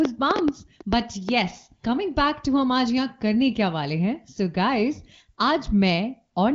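From 0.05 to 1.30 s a train of clicks, about seven irregular pops well above the speech, likely from interference or a faulty connection.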